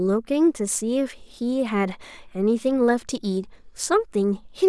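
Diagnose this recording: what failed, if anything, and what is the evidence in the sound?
Nothing in the speech recording points to a failure at any stage, so there's really nothing to diagnose here.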